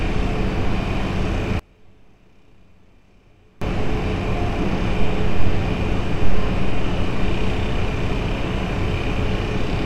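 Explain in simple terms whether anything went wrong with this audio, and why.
One channel inverted, from about 1.59 to 3.62 seconds: the sound drops away almost completely, becoming very faint. The likely cause is one stereo side flipped upside down, so when both sides are combined, everything they share cancels out and little remains.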